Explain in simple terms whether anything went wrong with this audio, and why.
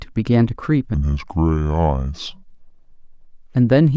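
From 0.94 to 3.54 s the speech turns slow and deep. This is a wrong sample rate: it plays at two-thirds speed, about seven semitones lower.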